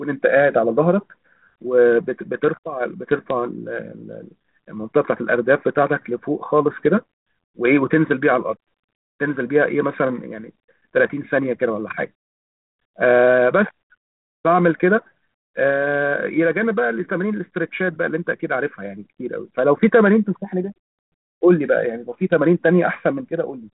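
Speech, with no technical faults heard anywhere.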